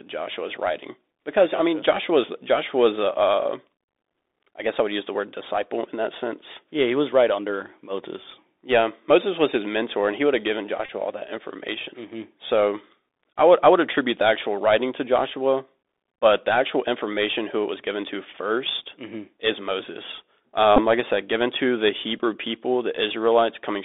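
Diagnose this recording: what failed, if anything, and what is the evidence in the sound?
The Bluetooth CVSD headset codec, a codec-stage fault, runs throughout. The sound sits in a narrow line band of about 250 Hz to 3.6 kHz, with granular hiss underneath and scratchy, overloaded sibilants. That slope-overload grit from the 64 kbps delta coder distinguishes it from plain telephone band-limiting.

A Bluetooth headset packet repeated on the wireless link at 10.86–10.91 s, between "he would have given" and "all that information", and again at 20.76–20.81 s before "like I said given" and at 22.19–22.22 s after "said given to the". The decoder replayed stale packets, producing a brief buzz near 267 Hz rather than a silent dropout. The longest run, about 30 ms, fits roughly eight lost 3.75 ms packets.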